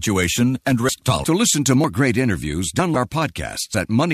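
At 0.89 s there's a small skip in the speech, audio missing between chunks, likely from a 1 s chunk boundary dropping about 50 ms and splicing straight across.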